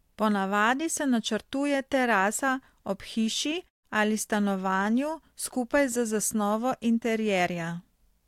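Nothing goes wrong in this speech recording; the background dropping away to silence in the gaps between phrases is ordinary gating, and the sound always comes back in time for the next phrase.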